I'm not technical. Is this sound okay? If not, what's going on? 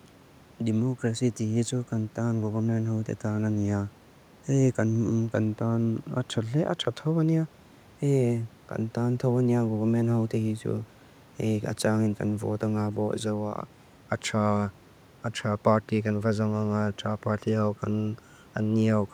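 Yes, the sound is okay, with only the faint background noise of the room sitting well beneath the speech.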